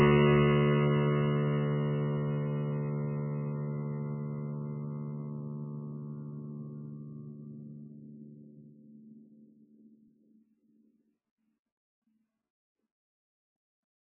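From start to finish the music sounds heavily squashed, most likely by MP3 compression at a very low bitrate, something like 8 kbps. Nothing survives above 3 kHz, so it's dull and boxy, with watery, swirling texture and smeared attacks as weak frequency content flickers in and out.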